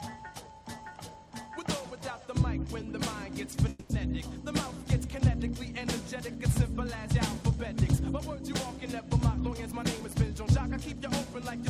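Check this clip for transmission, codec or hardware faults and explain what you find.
Two faults are audible: a call audio freeze and a jitter buffer speed-up.

From 3.69 to 3.91 s there is a call audio freeze. The sound stops moving forward, and the last moment is stretched out as a buzz or hiss that fades. It lasts about 200 ms. The likely cause is packets held up in transit, leaving the jitter buffer empty. The receiver filled the wait with continued sound. Afterwards the audio picks up where it stopped. Nothing is lost, but the rest of the clip runs about 200 ms later.

From 9.69 to 11.63 s there is a jitter buffer speed-up. The receiver had more audio stored than it wanted, so it trimmed the excess to reduce delay. It cut many tiny pieces, each one or a few pitch periods long. Together these add up to about a tenth of a second. Playback runs at 105% speed with the pitch unchanged. At that rate the passage starts to sound hurried.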